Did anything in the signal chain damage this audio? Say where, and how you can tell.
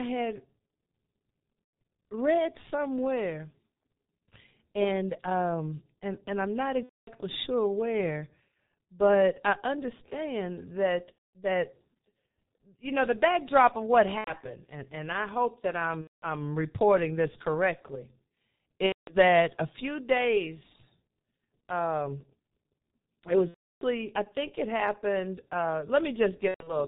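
Yes. The G.723.1 codec, running heavily at about 6.3 kbit/s, muffles and roughens the whole clip. The spectrogram is empty above 4 kHz, with smeared consonant onsets.

At the network stage, VoIP packet loss concealed by the speech codec appears at 1.64, 6.83, 11.12, 14.18, 16.01, 18.86, 23.49 and 26.48 s, lasting 0.09–0.36 s. Each gap shows as the last sound stretched out and fading.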